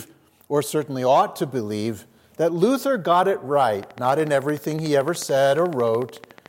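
Interference from nearby equipment or a faulty connection or power supply is the likely source of a train of clicks that begins at 3.83 s and runs to 6.47 s. Pulses of much the same shape arrive at an even 13.7 per second, around forty in all, and their peaks rise to about 5 dB above the surrounding audio, so they come across as a steady, sharp ticking laid over the final seconds of the recording.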